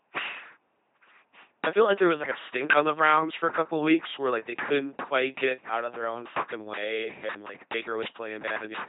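From start to finish the speech runs through an LPC-10 vocoder, and the damage is heavy. Each moment gets squeezed into either a buzzy pulse train or plain noise feeding a small resonant filter, so it comes out as that flat, mechanical robot voice, with stray buzzes and hiss wherever the voiced/unvoiced call goes wrong. Nothing survives above 3.8 kHz, and the coarseness fits the 2.4 kbit/s military vocoder rate.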